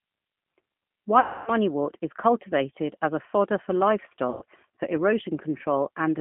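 From the start, the speech passes through the G.729 codec at 8 kbit/s, and its damage is plainly audible. The decoder rebuilds each 10 ms frame from a vocal tract filter, a pitch predictor and a few coded pulses, so the speech sounds rough and slightly synthetic. The line band runs from 150 Hz to 3.4 kHz. On a spectrogram, energy stops sharply above 3.4 kHz, the lowest band is empty, and the harmonics look smeared.

At 1.20 to 1.51 s, just before "is cultivated as a", there is VoIP packet loss concealed by the speech codec. About 270 ms of audio is missing, which fits nine 30 ms packets. The decoder repeats its last pitch and filter with falling gain, so the sound stretches into a buzzy tone or a coloured noise that fades. Recovery is slow because each frame builds on the previous one. At 4.30 to 4.44 s, after "as a fodder for", a shorter gap of about 120 ms behaves the same way. In both places the spectrogram shows the stretched sound fading out, and the waveform shows a shrinking envelope.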